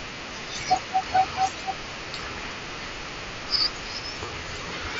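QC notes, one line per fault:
4.26 to 4.28 s, concealed Bluetooth headset packet loss: a short run of dropped packets, about 22 ms, which fits three lost in a row. The phone patched the gap by repeating the best-matching recent waveform over the wideband mSBC link, so you get a brief buzzy held tone and a slight warble as real audio resumes.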